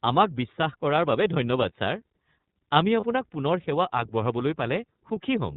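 Speech heard through the iLBC codec, plainly audible throughout. Nothing above 4 kHz survives, and the voice sounds slightly rough and synthetic. The roughness fits a 13.33 kbps stream in 30 ms frames, each coded on its own. There are lost iLBC frames at 3.00 to 3.04 s. One 30 ms frame is missing. The decoder fills it by repeating the last pitch cycle with added noise, giving a brief held, buzzy vowel. The voice is right again almost at once.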